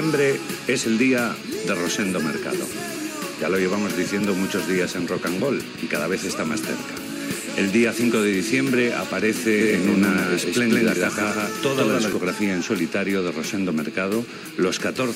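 From 9.61 s to 12.13 s the audio turns into a doubled audio track: a second, full-band copy of the same sound runs roughly 150 ms behind the first, at about the same loudness. It is likely a second capture through a slower path or an edit that left two copies out of step. Unlike an echo or reverb, the copy has no decay or room colouring, and it cuts in and out abruptly at those times.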